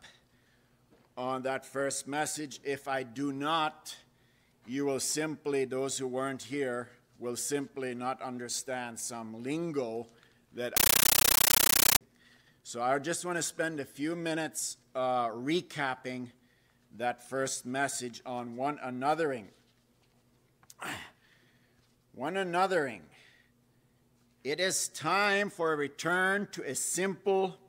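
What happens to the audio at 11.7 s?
At 11.7 s the sound is replaced by harsh, very loud chattering static. This is a compressed stream played as audio, running from 10.77 s to 12.01 s. A Dolby Digital bitstream reached the output undecoded, so its coded data was played as if it were ordinary samples. Each frame becomes a noise burst of about 13.3 ms followed by silence. The bursts repeat at 31.25 per second, which fits an AC-3 stream, and give the static its rapid rattle.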